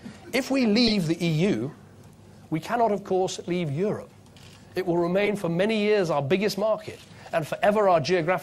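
Corrupt frame decoded at 0.87–0.92 s, 5.25–5.30 s and 6.51–6.54 s. Damaged compressed frames were played anyway, so misread gains and codes put energy at the wrong frequencies for the span of a few frames each time. The last burst is about 15 dB quieter.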